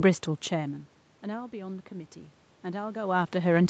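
From 0.53 to 3.29 s, automatic gain rising: the gain control reacts to an input drop of about 18 dB, as the talker moves away, by slowly adding about 4 dB. Voice and room noise swell together, only partly restoring the level.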